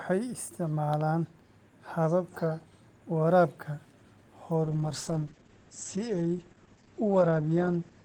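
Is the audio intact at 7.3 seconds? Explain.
No. From 4.65 s to the end, a call bitrate drop is under way: the encoder falls from 32 to 9 kbps, coarsening its coding and cutting the band from 20 kHz to 8 kHz. The speech sounds watery and muffled, unlike a clean low-pass, and continuous, unlike packet-loss dropouts.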